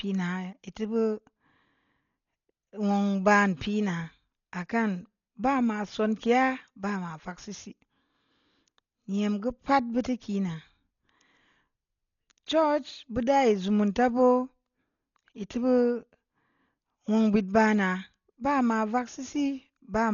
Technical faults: Dolby Digital compression

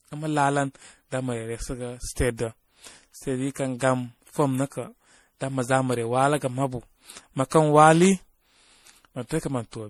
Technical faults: generation loss

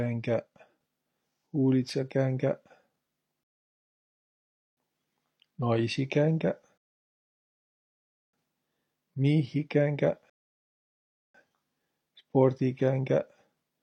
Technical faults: rebuffering stall

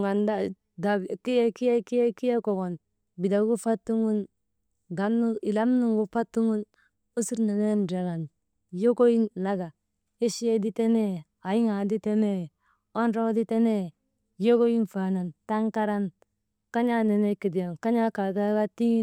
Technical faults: drift correction step

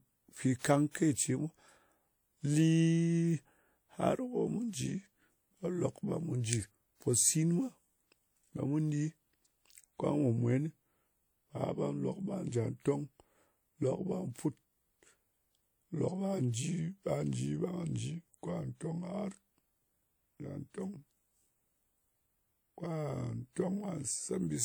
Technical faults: pre-echo

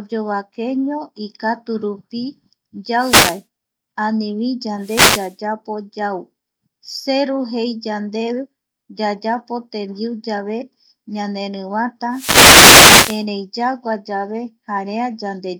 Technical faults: wireless microphone noise hit

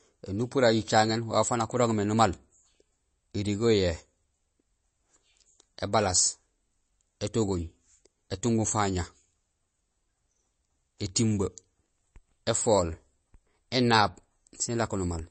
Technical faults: MP3 compression

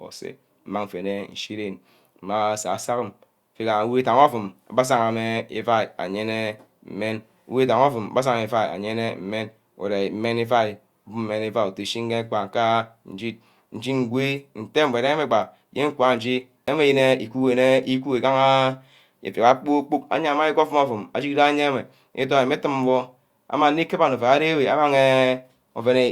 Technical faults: CD skip

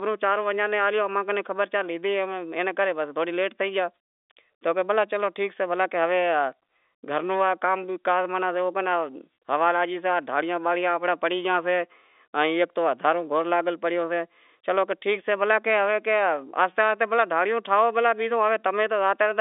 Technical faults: none

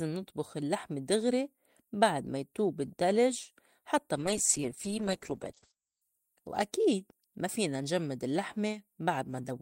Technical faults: call bitrate drop

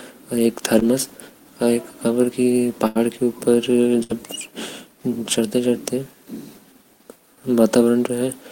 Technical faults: short concealed packet loss; burst of packet loss

